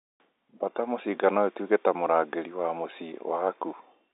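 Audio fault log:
Nothing stood out on listening to this telephone-band speech.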